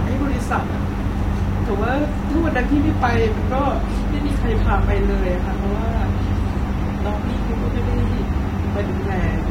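No technical faults can be heard anywhere in the recording. Nothing in the speech calls for a time, a value or an explanation.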